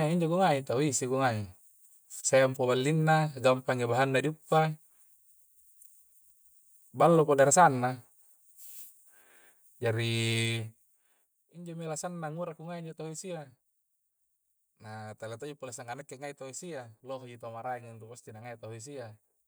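Zipper noise runs from 10.4 to 11.43 s, ending just before "injomi alasanna". The level drops by about 15 dB, but instead of gliding it falls in unsmoothed 2 dB steps, roughly ten per second. Each abrupt jump in gain puts a small click into the waveform, so a rapid ticking rides on the speech while it fades.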